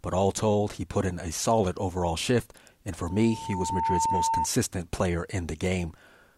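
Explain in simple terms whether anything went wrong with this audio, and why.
Loudspeaker feedback squeal, 3.05 to 4.48 s: the microphone re-amplifies its loudspeaker, so a 903 Hz tone swells up within a second, unlike a steady hum.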